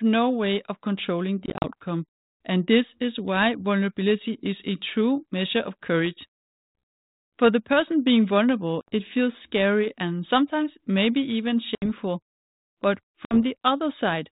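Speech carried over an ADPCM call, with light coding grain that points to 32 kbit/s G.726, suffers packet loss on an ADPCM call. Lost packets become silent holes, and the decoder's predictor and step size fall out of step with the sender's. The hardest hit is at 1.46 to 1.70 s, where about 100 ms drops out in short gaps. Further holes come at 8.81, 11.75 and 13.25 s. Each one is abrupt, and the speech returns slightly distorted for a brief stretch.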